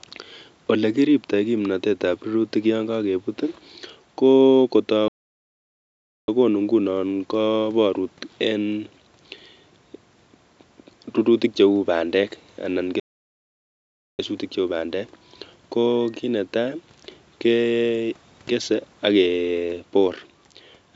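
At 5.08 s the speech cuts to silence for about 1.2 s, resuming at "ing'unon koborut en". At 12.99 s it stops again after "bandek anan" for about 1.2 s, returning with "cheuu bandek". Both gaps are likely playback stalls.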